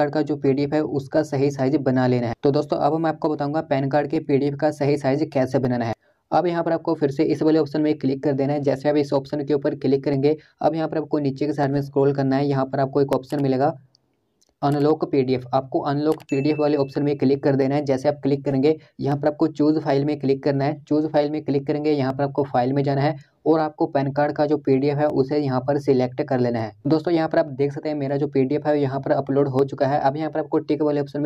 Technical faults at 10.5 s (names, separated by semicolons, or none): clock drift buffer slips